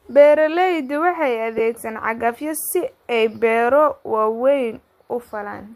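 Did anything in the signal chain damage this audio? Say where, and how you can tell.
Yes, at the Bluetooth wireless link: lost LE Audio frames between 1.58 and 1.60 s, just before "cagafyo si". About 15 ms of audio never arrived, which fits two consecutive frames on the likely LC3 stream at 7.5 ms each. The decoder patched the gap by replaying the last good spectrum with scrambled phase signs, so the speech briefly turns into a short, noisy smear instead of a clean transition.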